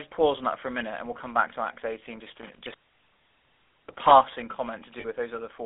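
The whole clip carries the GSM full-rate codec's buzzy, gravelly roughness, squeezed into a 300 Hz to 3.5 kHz phone band, consistent with a 13 kbps full-rate call. From 2.35 to 4.11 s there's an intermittent contact: a loose connection crackles and drops out for about a second, leaving just faint hiss. Then at 5.00 to 5.05 s you get lost GSM frames, about 40 ms patched by repeating the last good frame, which fits two dropped 20 ms frames and comes out as a brief metallic ring.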